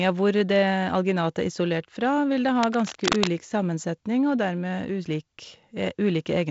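From 2.63 to 3.31 s, a worn cable or connector was likely being moved, its contact resistance jumping about and injecting dense, irregular bursts of noise: cable scratch noise. It sounds like scratching and rustling laid over the speech, only a little quieter than it.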